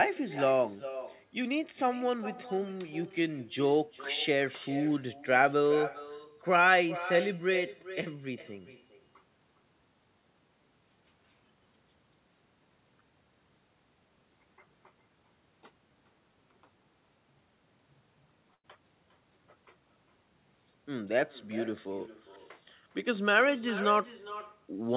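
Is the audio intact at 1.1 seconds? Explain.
No. At 1.1 seconds, as across the whole clip, there is echo with no canceller: the far end's loudspeaker leaks into its microphone and returns about 13 dB quieter, roughly 0.4 s late. On a spectrogram, each speech burst is trailed by a fainter copy.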